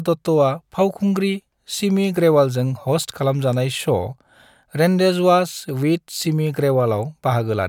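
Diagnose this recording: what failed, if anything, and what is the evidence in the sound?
No fault detected anywhere.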